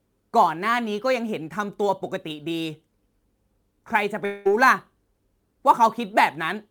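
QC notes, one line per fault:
Throughout: sample clock jitter. A hiss and roughness rides on the speech and grows on loud and bright sounds. It disappears in pauses. The converter clock wanders by a few microseconds, so steep waveform slopes are sampled at the wrong moment, leaving error around 35 dB below the signal.
4.25 to 4.47 s: long network dropout. About 200 ms of speech is missing, replaced by a fading buzz or hiss continuing the previous sound, with no silent gap. Speech then resumes further on without the lost part. A lost stretch of packets is the likely cause.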